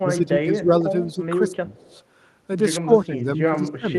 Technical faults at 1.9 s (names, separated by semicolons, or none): speech suppressed in double talk; echo leak